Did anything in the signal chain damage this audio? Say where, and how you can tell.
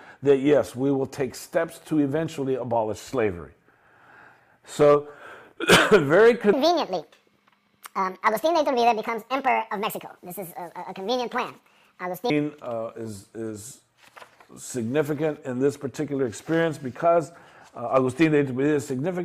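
Yes. A section at the wrong speed, 6.53 to 12.30 s, runs 1.69 times fast and about ten semitones high, likely from a playback clock mismatch.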